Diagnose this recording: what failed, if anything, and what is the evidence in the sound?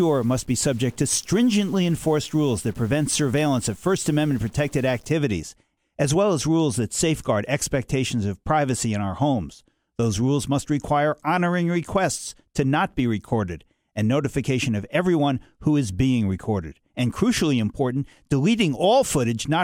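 From the start to about 5.1 s the speech turns gritty with noisy pauses, likely a stuck bit at the converter, worth about -45 dBFS.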